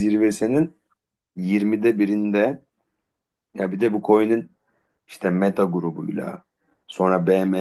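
No technical faults can be heard in this speech clip.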